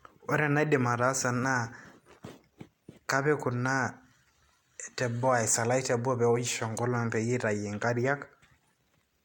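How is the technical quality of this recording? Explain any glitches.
No glitches or faults are audible.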